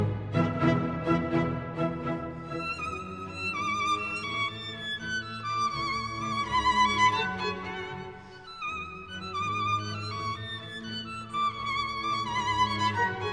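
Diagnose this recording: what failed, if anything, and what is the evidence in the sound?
Nothing in the recording points to a failure at any stage of the chain. No event in the sound calls for a diagnosis.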